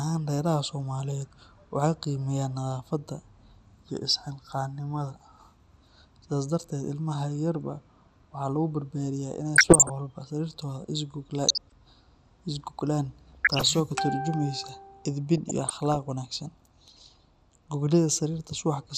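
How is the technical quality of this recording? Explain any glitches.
The speech is degraded throughout by coding damage, with four short bursts of corruption in the second half.

MP2 compression runs through the whole clip: the speech sounds dull, with a gurgling, granular texture as upper sub-bands drop out and the remaining bands are coarsely quantised. This is likely MPEG Layer II coding at a low rate, which fits around 80 kbps.

DAB burbling appears at 9.55–9.90 s, 11.44–11.72 s, 13.33–13.72 s and 15.38–15.96 s, heard as short blips of noise over the speech. A small fraction of bit errors slipped past error correction into the MP2 data, corrupting samples so short noise blips land in individual sub-bands.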